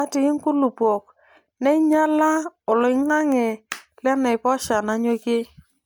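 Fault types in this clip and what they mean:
Generation loss: the speech has a swirly, smeared, hollow quality, and the attacks of sounds are blurred. It's more damaged than one decent MP3 pass would leave it, since the top end still reaches about 20.1 kHz, which fits a rate around 128 kbit/s. The likely cause is the audio being decoded and re-encoded as MP3 around four times, with each pass quantising on a shifted frame grid so the noise and spectral gaps pile up.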